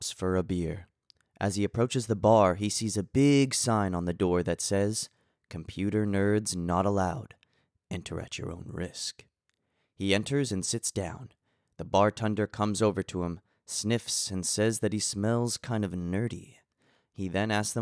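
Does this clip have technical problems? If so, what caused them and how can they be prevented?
No, there's nothing technically wrong to hear in this speech clip, so there's nothing here that needs fixing or preventing.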